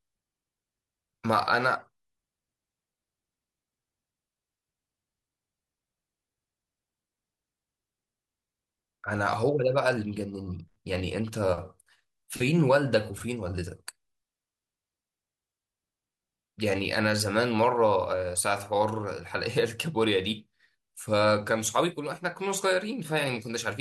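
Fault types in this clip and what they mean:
No technical faults can be heard anywhere in this recording. There is nothing in the speech to list under any fault heading.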